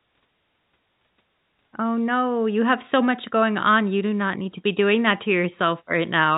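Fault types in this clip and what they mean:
Nothing goes wrong in this speech, which simply comes through as ordinary telephone-band audio with the top end stopping around 4 kHz, just as a normal phone line carries it.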